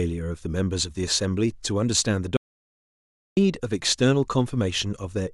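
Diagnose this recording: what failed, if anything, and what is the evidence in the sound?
An audio dropout to silence runs from 2.37 s to 3.37 s, about one second of lost speech. The voice stops abruptly mid-flow and resumes just as suddenly, and the gap between is silent with no room tone or noise floor at all. That points to the capture stage rather than the acoustics: the input signal was likely lost at the device or link, through a disconnect or mute, while the recorder kept writing zeros.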